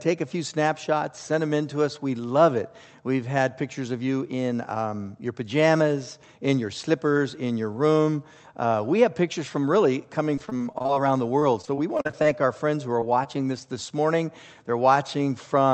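Repeated packet loss (robotic sound) appears from 10.35 to 11.01 s and again from 11.39 to 12.26 s. Over each stretch, audio packets kept failing to arrive in time. The receiver patched every hole by extending the last sound, and the next hole came soon after. Roughly a quarter to a third of each stretch is synthetic fill, with gaps up to about 40 ms. The result is a choppy stutter with pieces missing.

Short concealed packet loss follows twice: from 13.00 to 13.04 s and from 13.24 to 13.27 s. In each case a few hundredths of a second never reached the decoder. The receiver papered over the hole by continuing the preceding sound, then blended back into the real signal. Through the call path's Opus coding, which limits the top end to about 8 kHz, each one comes across as a brief smear or wobble, and a short sound can drop out.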